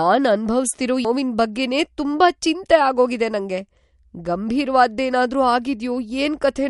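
From the first moment, the speech was likely squeezed through MP3 compression at a rate that fits about 48 kbps. Short of bits, the encoder cut everything above 11.2 kHz and dropped weak detail, so the audio sounds dull and plainly watery, with swirling sibilants.

At 1.04 s a CD skip occurs: the player's laser jumped to another track of the spiral, muted for a very brief instant, then resumed elsewhere. You hear a tiny tick and an abrupt jump just before "ಬಗ್ಗೆನೇ ತುಂಬಾ ಚಿಂತೆ ಆಗೋಗಿದೆ".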